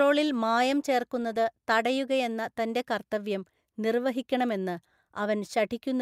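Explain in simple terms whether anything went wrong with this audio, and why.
Nothing went wrong here: the recording holds together from beginning to end, with no gaps, jumps, crackles or level problems anywhere in it.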